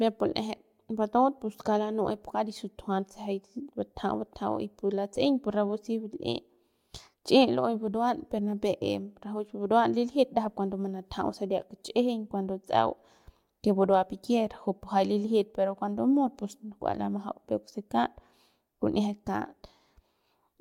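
No technical faults can be heard anywhere in the recording; the signal stays continuous and intact throughout.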